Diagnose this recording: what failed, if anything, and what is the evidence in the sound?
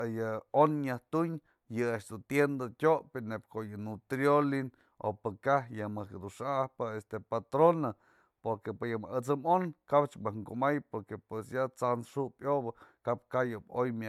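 Codec stage: speech sounds swirly, smeared and hollow throughout, attacks blurred, beyond what 128 kbit/s MP3 explains; likely generation loss from about four re-encodes.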